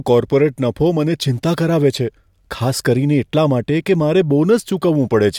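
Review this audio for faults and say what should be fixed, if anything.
Nothing here needs fixing; the speech comes through without any problem worth chasing.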